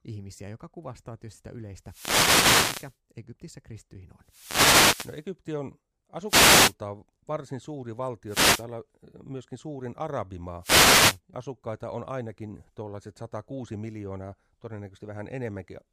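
Wireless microphone noise hits occur at 1.84–2.96, 4.23–5.27, 6.27–6.74, 8.27–8.66 and 10.60–11.20 s: the FM radio link fades under multipath cancellation, letting receiver noise surge into brief static swishes over the speech.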